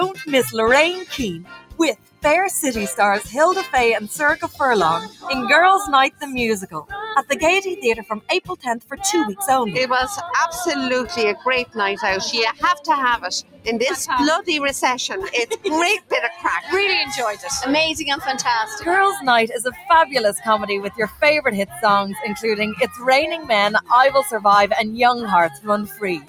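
A noise suppressor applied to music or sounds runs through the whole clip. Built for speech, it treats steady tones, ambience and reverberant tails as noise, so the level swings by around 10 dB as it clamps and releases. Attacks pass while sustained material sinks, giving a pumping, thinned character. On a spectrogram, held partials and decay tails fade or break up behind intact onsets. The waveform envelope shows abrupt dips following each transient.

Sound cut by the noise suppressor appears in six stretches: 0.19 to 2.24 s (deepest drop about 19 dB), 4.41 to 8.99 s (about 18 dB), 11.35 to 13.67 s (about 18 dB), 15.51 to 21.83 s (about 19 dB), 22.81 to 24.39 s (about 17 dB) and 25.49 to 26.28 s (about 17 dB). Within each stretch the attenuation hits only parts, from half a second to a second and a half in total. There, sustained sound collapses and tails are chopped. A spectrogram shows dark holes across the band, and the waveform narrows sharply.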